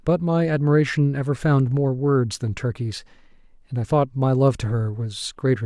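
No technical faults can be heard anywhere in the speech recording, and the signal stays continuous and intact throughout.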